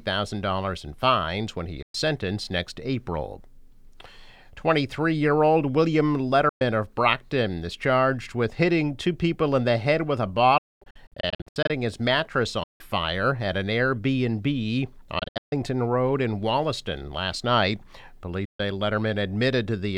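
The audio drops to silence six times, at 1.82 to 1.95, 6.49 to 6.61, 10.58 to 11.70, 12.63 to 12.81, 15.19 to 15.53 and 18.45 to 18.60 s, then resumes as though it had kept playing. This is likely Bluetooth dropout, with packets failing to reach the headphones in time.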